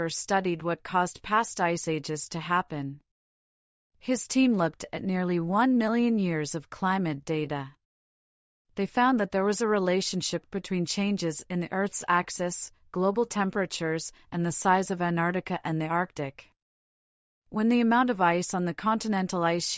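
No technical faults are audible anywhere in the audio.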